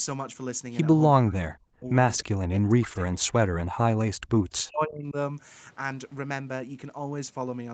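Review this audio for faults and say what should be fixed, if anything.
Speech suppressed in double talk, from 1.2 to 1.89 s and again from 2.36 to 5.15 s: the speech sinks by as much as about 40 dB, fading and breaking up across both stretches before recovering. The likely cause is an echo canceller that hears the far side talking at the same moment, cannot tell this talker apart from loudspeaker echo, and clamps the whole signal down. To prevent it, use a headset or a double-talk-robust echo canceller with gentler suppression.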